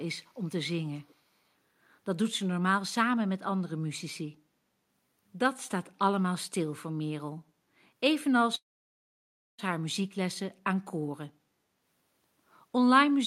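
At 0.94 to 1.15 s a faint echo leak appears: a delayed copy of the speech, trailing the original by 445 ms and sitting far below it. The likely cause is a far-end loudspeaker whose echo canceller let part of the microphone pickup slip back into the call. On a spectrogram it shows as a weak, smeared duplicate of earlier harmonic patterns; on the waveform it is barely visible beneath the main signal.

From 8.55 to 9.60 s comes a call audio freeze lasting about 1.03 s. The last sound is stretched briefly, then the audio drops to silence for about 0.97 s before resuming exactly where it stopped, so nothing is lost and everything after it arrives about 1.03 s later. Packets were likely held up in transit and the jitter buffer ran dry. The waveform shows a short decaying tail and then a flat line; the spectrogram shows a brief smeared band followed by a blank gap.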